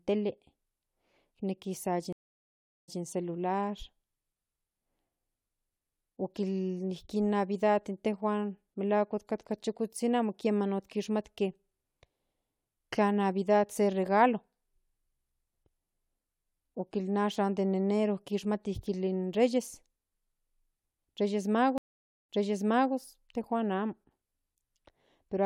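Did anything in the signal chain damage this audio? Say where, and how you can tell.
Yes: a stream reconnect at the network stage, at 2.13–2.99 s after "nejki san" and at 21.78–22.94 s before "tejuan amo". The speech drops out (0.75 s, then 0.51 s) and resumes 0.12 s and 0.65 s earlier, repeating material as a fresh decoder restarts on resent data.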